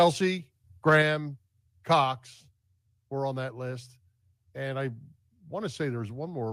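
Speech, with two faults close together. From 0.88 to 0.97 s the loudest sound flattens and gains a crackling edge. That is microphone overload. The input was likely set too high, so peaks ran about 2 dB past the converter's limit. Around 3 percent of samples had their tops cut off. At 1.02 s the whole signal drops about 4 dB in one step. Voice and background fall together. This is the microphone volume being stepped down. The call software likely lowered the input gain, reacting to the clipped peak just before.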